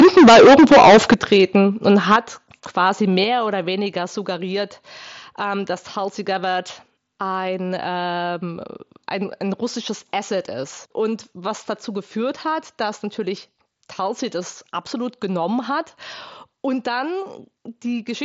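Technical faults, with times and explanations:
0.00–1.56 s and 1.87–2.16 s, microphone overload: input gain was likely set too high, so speech peaks run about 14 dB, then about 4 dB, past full scale, leaving flattened, harshly crackling loud syllables.
1.14 s, 2.16 s and 3.24 s, microphone volume stepped down: the call software likely cut input gain after clipping, so voice and background drop abruptly by about 10, 6 and 5 dB.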